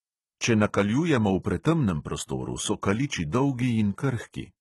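Throughout the speech, the upper band sounds bright but synthetic, with gritty, lispy s sounds and nothing above 11.8 kHz, likely HE-AAC compression at a low bitrate near 16 kbps. Unlike a plain low-pass cut, treble remains but is copied upward, so its harmonics misalign.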